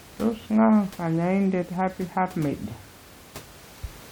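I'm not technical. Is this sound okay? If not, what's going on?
Yes, there are no faults in the speech; the faint background noise is just the sound of the room the microphone was in, well below the speaking level.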